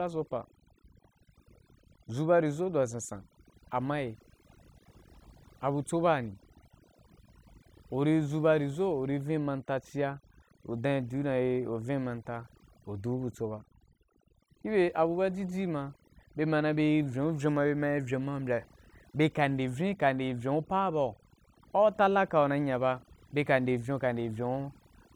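From start to finish the speech carries overdone noise removal: an over-aggressive reducer zeroes individual frequency bins near its noise estimate, taking quiet voice detail too. Background drops to near silence with twinkling specks, and a spectrogram shows scattered isolated dots between sparse, ragged harmonics.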